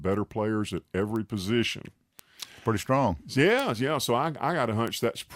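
A speech recording marred by four bit error spikes, sharp single-sample ticks at 1.16, 2.19, 3.60 and 4.88 s, peaking at about -20, -13, -7 and -13 dBFS. Each is one flipped bit that throws a sample up by a power of two before it snaps back, so the tick is broadband and ignores the speech. Unlike a dropout click, nothing goes missing around it, and unlike a plosive pop there is no low-frequency thump.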